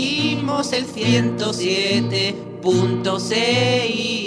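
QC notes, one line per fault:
No faults detected in clip.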